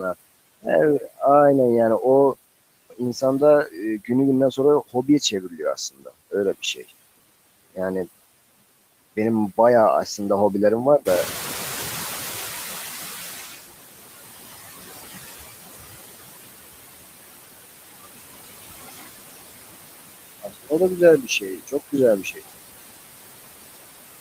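Noise suppressor artifacts run through the whole clip. The suppressor pulls steady background noise down by about 19 dB, band by band and frame by frame. The leftover noise sinks between phrases and rises under the speech.

The suppressor also cuts speech, twice. From 3.65 to 3.78 s it mistakes a brief stretch of speech for noise and turns it down by about 12 dB. The second cut spans 4.93 to 6.1 s, reaching about 21 dB. Roughly a few hundred milliseconds sound swallowed or faint.

Inside that second cut, at 5.61 s, one lost packet is rebuilt from error correction. The next packet carried a low-bitrate copy. The decoder played it, so there is no gap. Those 20 ms sound rougher and noisier.

From 11.05 to 13.63 s the noise suppressor is catching up. The room noise jumps about 13 dB near 11 s. The suppressor's noise estimate lags. The noise comes through with less reduction at first, then sinks over about 2.6 s as the reduction returns to about 18 dB.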